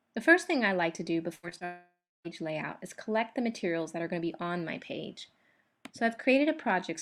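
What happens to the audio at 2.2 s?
A long network dropout, likely from lost packets, runs from 1.65 to 2.26 s: about 0.6 s never arrives, the last sound smears into a fading buzz, then silence.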